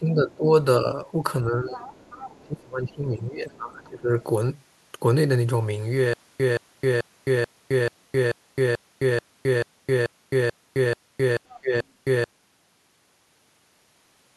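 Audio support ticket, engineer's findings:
Speech suppressed in double talk: talker ducks by up to about 20 dB at 0.0–1.02 s, 1.43–1.94 s, 2.44–4.18 s and 11.61–11.75 s. Likely the echo canceller clamping both sides during overlap.

Other side's voice leaking through: far-end talker audible at 1.72–2.43 s (about 15 dB under the speech), 3.52–3.89 s (very faint) and 11.48–11.85 s. Residual loudspeaker echo the AEC likely didn't fully cancel.

Stutter with silent gaps: 6.13–12.24 s, a 173 ms fragment replays 14 times, each followed by 264 ms of dead digital silence, so one every 436 ms. Likely the stream stalling and re-serving its last chunk; that audio is gone.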